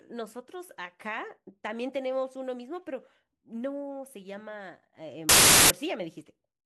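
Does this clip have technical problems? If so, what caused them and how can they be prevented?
Yes. From 5.29 to 5.70 s the speech collapses into loud noise with the original buried inside, playing 1.33 times too fast. This is wrong sample width, which fits packed 24-bit samples being read as 32-bit, so most values splice bytes from neighbouring samples. A byte-order error would leave speed and pitch unchanged, but here both rise. Prevent it by taking the sample width from the file header or stream metadata instead of assuming it.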